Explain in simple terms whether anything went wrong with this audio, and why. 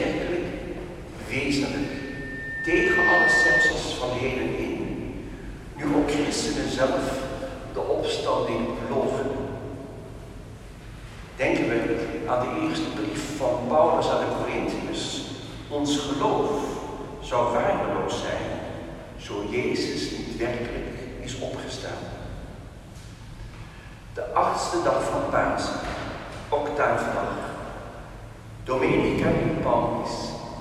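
Between 1.81 and 3.73 s there is loudspeaker feedback squeal: a microphone picked up its own loudspeaker, and a 1.8 kHz tone fed on itself. Unlike a steady interfering whistle, it starts faint and swells over roughly a second and a half into a loud squeal.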